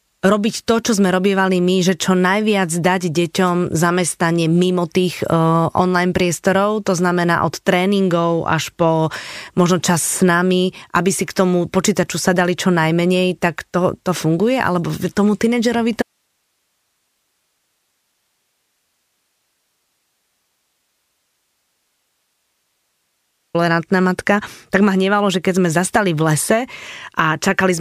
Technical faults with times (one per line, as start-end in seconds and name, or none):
16.02-23.54 audio dropout to a faint residue